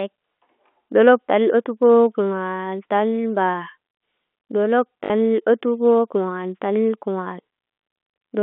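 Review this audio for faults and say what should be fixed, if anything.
Packet loss with last packet repeated occurs from 5.04 to 5.1 s: 60 ms went missing, which fits three 20 ms packets, and the receiver replayed the last one. The repeats ignore the pitch period, and the gap stutters robotically with a 50 Hz buzz. Pitch-synchronous packet loss concealment, backed by forward error correction or a deeper jitter buffer, would prevent it.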